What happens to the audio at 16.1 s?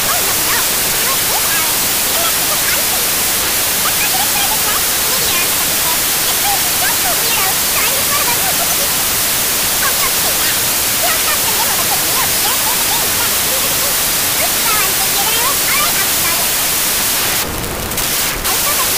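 At 16.1 s, as throughout the clip, loud noise buries the original, which plays 1.5 times too fast and high: wrong sample width, 16-bit samples read as packed 24-bit, scrambling most values.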